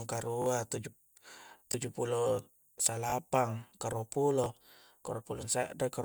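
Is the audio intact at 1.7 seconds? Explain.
No. At 1.72 to 1.74 s there is a repeated buffer: fresh audio reached the output late, so the device replayed its last block, which fits a 20 ms buffer. That short piece sounds twice, with a hard join at the repeat, and is heard as a click or brief buzz, while roughly 20 ms of speech is lost.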